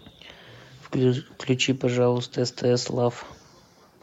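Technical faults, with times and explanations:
No technical faults detected in this speech recording.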